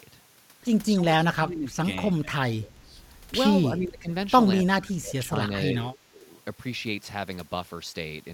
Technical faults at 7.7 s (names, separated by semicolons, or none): none